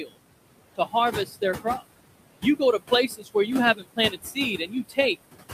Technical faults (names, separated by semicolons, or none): noise suppressor artifacts; speech cut by the noise suppressor